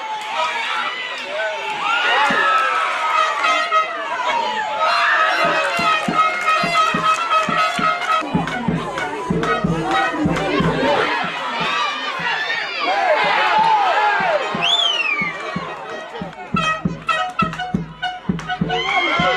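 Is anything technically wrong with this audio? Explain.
No, nothing is technically wrong with this audio.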